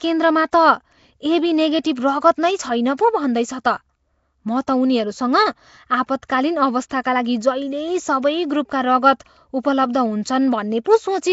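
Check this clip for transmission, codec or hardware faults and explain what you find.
Two codec faults are audible: a rough, hissy coloration across the whole recording, and three brief smears of noise just ahead of sharp attacks.

Nellymoser compression runs the full length of the speech. Nothing is present above about 7.7 kHz, and the remaining band carries a coarse hiss and a watery, smeared texture. The likely cause is Flash's Nellymoser Asao codec, at a damage level that fits roughly 32 kbps. It gives each block of samples a fixed, small bit budget, so weak bands are dropped and refilled with synthetic noise. Plain band-limiting would sound dull but clean. Here the noise fill and the underwater smear set it apart.

Pre-echo occurs at 2.97 s, 6.89 s and 10.84 s. Each time, a short hiss rises about 16 ms before an abrupt onset, and the attack itself sounds softened. The codec spreads quantisation noise evenly across a transform block, so when a sharp transient arrives late in that block, the noise meant to sit under the loud part also fills the quiet gap before it. 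A click or dropout would be a separate event. This hiss instead leads directly into the attack and is shaped by it.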